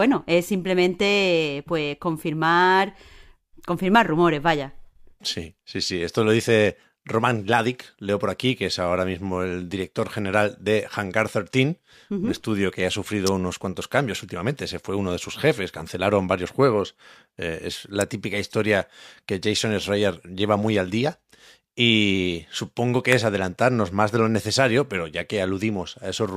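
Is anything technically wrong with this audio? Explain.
Yes. Three electrical switching spikes appear as sharp snaps: at 13.27 s between "un estudio que ha" and "unos cuantos cambios últimamente", at 18.01 s just before "típica historia que", and at 23.12 s between "supongo que" and "es adelantarnos más de". Each peaks around -5 dBFS and is likely a short arc from a nearby switch, motor or static discharge picked up by the audio line.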